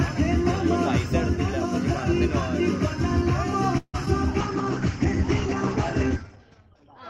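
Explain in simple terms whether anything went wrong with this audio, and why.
A call audio freeze at 3.77 to 3.96 s: the sound stretches into a fading buzz and briefly goes silent, likely because packets were held up, then resumes where it stopped, now slightly late.

Short concealed packet loss at 4.06 to 4.08 s: a sliver of audio never arrived, so the receiver bridged it by extending the previous sound, leaving a tiny smear or wobble.

A call bitrate drop from 4.42 s to the end: the connection told the encoder to save data, so the sound turns rougher and duller, losing everything above 8 kHz.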